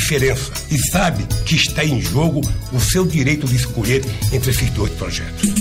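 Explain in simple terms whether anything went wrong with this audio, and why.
Something did go wrong: periodic USB or driver dropouts. From 0.42 s to 5.42 s, roughly once a second, a sliver of audio, around a millisecond, just gets skipped. A background task stalls the audio path on a fixed schedule, so you hear small, evenly spaced ticks.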